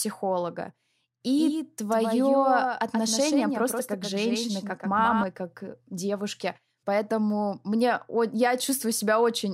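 Doubled audio track from 1.38 to 5.24 s, starting at "как девушки": a copy about 5 dB quieter trails roughly 150 ms behind, likely from a slower capture path.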